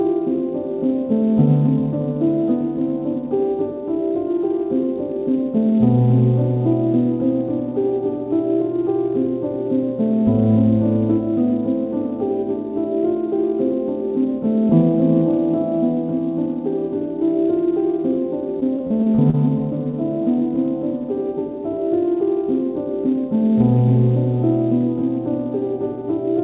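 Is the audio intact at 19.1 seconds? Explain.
No. At 19.1 seconds the sound is inside a stretch of repeated packet loss running from 18.6 to 19.35 s. Seven short gaps, the longest 31 ms, are each patched by extending the preceding sound, giving a choppy, robotic texture with pieces missing.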